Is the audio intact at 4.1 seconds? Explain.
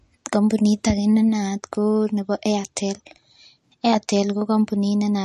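No. At 4.1 seconds, as throughout the speech, there is nothing above 12 kHz and a watery, swirling texture, likely from MP3 compression at a low bitrate around 40 kbps. Short of bits, the encoder cuts the treble and switches weak frequency lines on and off between frames.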